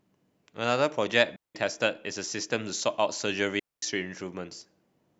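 At 1.36 s the speech drops into a clean hole of near silence lasting about 0.19 s, and at 3.59 s a second, longer one of about 0.23 s follows. Both are digital wireless dropouts: the receiver lost too much data and muted with a very fast fade, leaving no noise burst either side.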